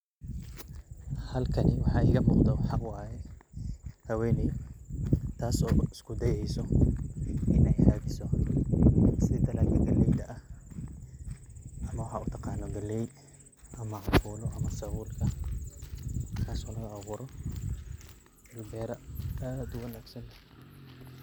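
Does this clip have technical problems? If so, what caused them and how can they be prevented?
No, no technical faults here.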